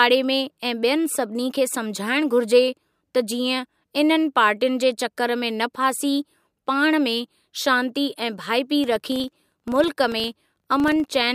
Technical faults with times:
8.84-11.34 filter restarted on every block

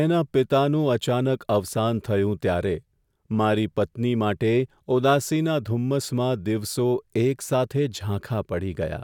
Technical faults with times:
none

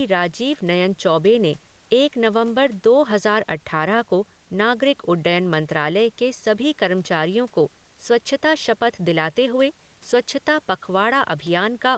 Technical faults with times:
0.00-11.97 gain pumping

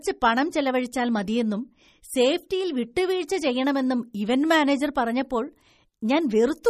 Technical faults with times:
0.00-6.70 MP3 compression

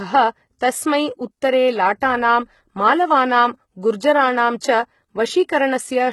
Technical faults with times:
0.00-6.13 HE-AAC compression

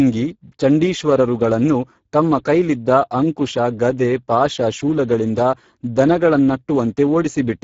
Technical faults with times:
0.00-7.64 Speex codec

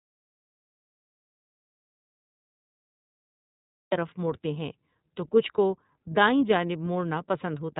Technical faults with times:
0.00-7.79 iLBC codec
0.00-3.92 audio dropout to silence

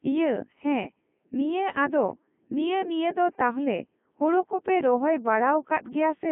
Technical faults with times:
0.00-6.32 Codec 2 vocoder

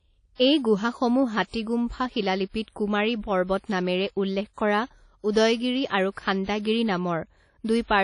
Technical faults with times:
0.00-8.03 WMA compression

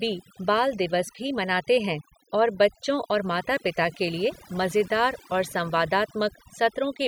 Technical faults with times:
0.00-7.08 overdone noise removal

